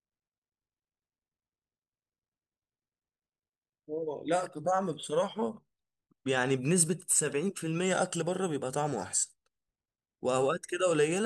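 No technical faults can be heard anywhere in the recording: the speech signal stays continuous and steady in level, with nothing interrupting or disturbing it at any point.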